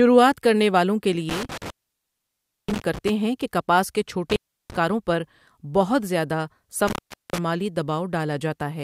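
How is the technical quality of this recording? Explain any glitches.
The speech has three dropouts from an intermittent contact, meaning a loose cable or plug briefly losing its connection. The first is at 1.29 to 3.09 s, where the signal is gone for about 0.98 s. Then 4.30 to 4.76 s, open for about 0.34 s, and 6.88 to 7.38 s, open for about 0.41 s. Each time the contact breaks, the speech cuts out with a crackle at the edges as the connection scrapes open and closed again.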